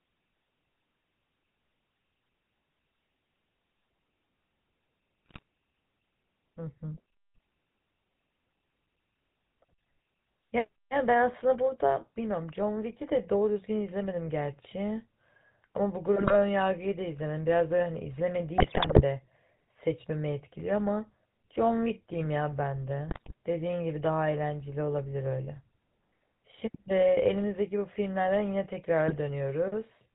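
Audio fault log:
Throughout: GSM full-rate codec. The speech is band-limited to 4 kHz with a steady buzzy, gravelly roughness from pulse-driven vocal-tract modelling, which fits a 13 kbps GSM full-rate stream. Unlike bit errors, the damage is constant and never jumps in level or pitch.
5.26–5.42 s, 16.16–16.36 s, 18.58–19.02 s, 23.08–23.33 s, 29.08–29.18 s: GSM bit errors. Short bursts of squawks, pops and gargling as corrupted filter, pitch and gain values warp the spectrum or spike the level frame by frame. The error rate is a few percent. Unlike packet loss, the sound turns garbled instead of dropping out, and the 18.58 s burst is the longest.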